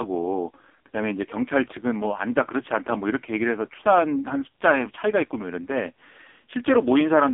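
A speech clip heard through the AMR narrowband mobile codec from start to finish. Nothing reaches past about 3.6 kHz, and the low end thins out below roughly 250 Hz, the classic phone band. The codec models the vocal tract and excites it with a few pulses per 5 ms subframe. Here that model is starved of bits. The voice turns buzzy and synthetic, with heavy codec damage that points to one of AMR-NB's lowest modes, near 5.15 kbps.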